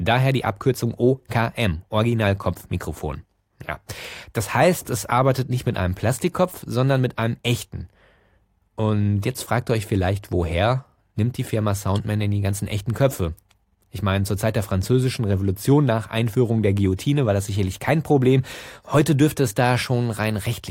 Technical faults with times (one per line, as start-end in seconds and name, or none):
none